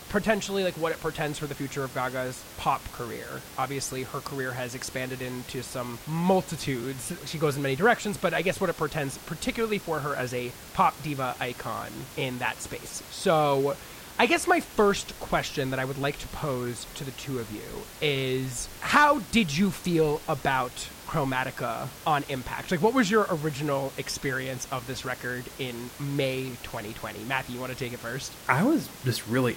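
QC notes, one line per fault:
No fault found.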